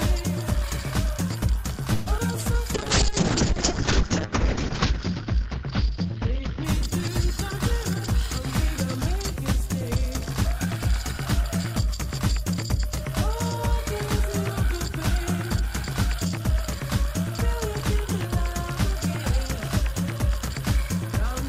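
At 1.93 s the audio stalls for about 129 ms, until 2.08 s. The last sound is drawn out as a fading continuation rather than dropping to silence. This is a call audio freeze, likely caused by packets held up in transit while the jitter buffer ran dry. Unlike packet loss, nothing is missing: the audio resumes exactly where it stopped, and the whole stream now runs about 129 ms later.

Just after, from 2.18 to 2.21 s, there is a short concealed packet loss. About 40 ms of audio never reached the decoder in time, and the receiver covered the hole with a brief extrapolated patch of only a few milliseconds. It sounds like a quick smear or wobble. Here material is actually lost, which pulls the timeline back by roughly 40 ms. The freeze, by contrast, added delay and lost nothing.

From 2.76 s to 9.67 s comes a call bitrate drop. The encoder's budget falls from 128 kbps to 6 kbps and stays at the bottom for about 2.13 s. 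At that rate the coding turns coarse and watery, and the top end is cut from 20 kHz down to 8 kHz, so the sound becomes both rough and muffled. That dullness across a long stretch separates it from the brief glitches before it.

Overlapping the tail of that stretch, from 9.11 to 10.78 s, is a jitter buffer speed-up. The buffer was holding surplus audio, so the receiver trimmed short pitch-period pieces repeatedly, about 70 ms in total. Playback runs at 104 % speed. The pitch does not rise, which is what distinguishes this trimming from simply playing the audio back faster.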